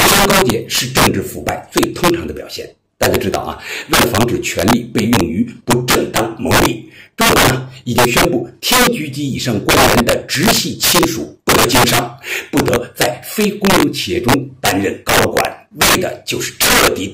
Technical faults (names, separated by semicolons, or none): integer overflow